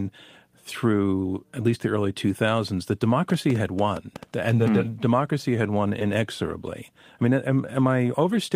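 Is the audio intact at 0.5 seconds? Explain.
Yes, the speech at 0.5 seconds is intact, with no fault to be heard at that moment.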